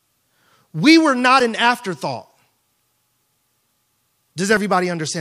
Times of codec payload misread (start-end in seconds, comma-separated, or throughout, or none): none